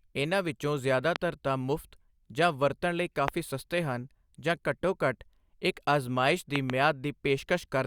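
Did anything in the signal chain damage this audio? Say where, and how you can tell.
Yes. Loud pops, sharp thumps about 20 dB above the speech, hit at 1.16–1.18 s, 3.28–3.30 s and doubled at 6.56–6.72 s, likely from voltage spikes in the analogue wiring.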